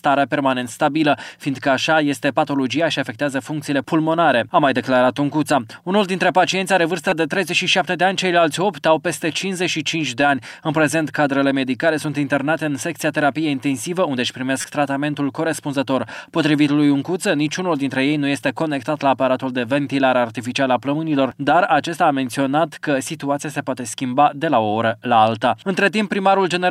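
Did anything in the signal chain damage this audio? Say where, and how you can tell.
Yes. At the codec stage, corrupt frames were decoded: brief bursts at 7.09–7.12 s, the stronger of the two, and at 14.61–14.65 s, roughly 10 dB lower. Each spans about two frames, fitting flipped bits that made the decoder misplace energy across frequency.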